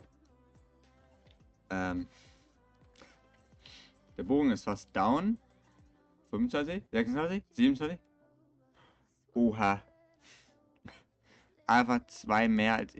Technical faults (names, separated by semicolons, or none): none